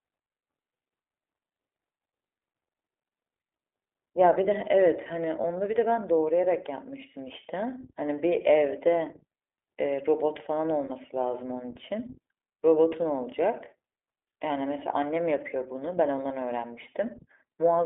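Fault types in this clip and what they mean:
iLBC codec: The speech passed through iLBC, a narrowband VoIP codec that codes each 20 ms frame on its own, here at a rate that fits 15.2 kbps, over a line band of roughly 300 Hz to 3.6 kHz. Everything above that band is gone, so the speech sounds thin and boxed in. The coding damage is plainly audible as a rough, slightly synthetic edge on the voice throughout.
Lost iLBC frames: Packets carrying iLBC frames went missing, and the decoder filled each gap by repeating the last pitch cycle mixed with noise. The first loss is a single 20 ms frame at 5.42 s. Two 40 ms losses of two frames each follow, at 10.86 to 10.91 s and 12.88 to 12.93 s. Each is a brief held, buzzy vowel-like smear, and because each frame is decoded independently, the speech snaps back clean straight afterwards.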